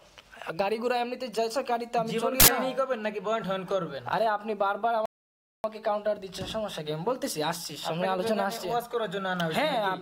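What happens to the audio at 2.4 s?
At 2.4 s the audio is replaced by a short, loud burst of harsh digital noise lasting until 2.48 s, the sign of an uninitialised buffer. An 80 ms block was sent to the output before any audio had been written into it, so whatever leftover data sat in that memory was played as if it were sound. A dropout would leave a gap of silence; here the missing block is filled with loud garbage instead.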